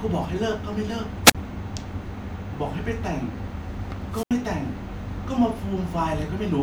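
At 1.24 to 1.35 s and again at 4.11 to 4.31 s, the speech shows a wireless microphone squelch dropout: the FM radio link fades, hiss rises briefly, then the receiver's squelch mutes the output for about 31 ms and 77 ms respectively before the speech returns.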